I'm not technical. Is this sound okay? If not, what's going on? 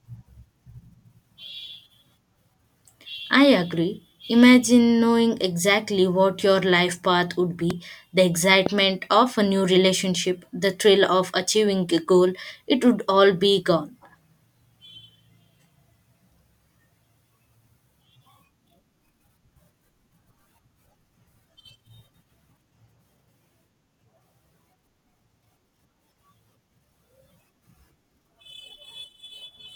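No, there are two loud pops in this speech clip. The first hits at about 7.70 to 7.73 seconds, right after "your life path would", and the second, a bit stronger, lands at about 8.66 to 8.69 seconds, just before "of a new relationship". Each is a single sharp click-thump sitting on top of the talking, which keeps going underneath. The likely cause is a sudden electrical jolt, such as a plug being nudged, a switch or static, reaching the recording.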